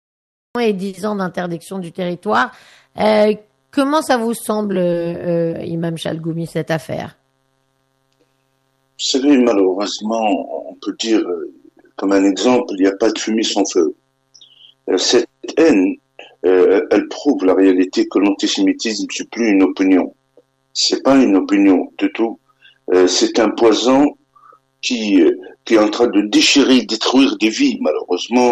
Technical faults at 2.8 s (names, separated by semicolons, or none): none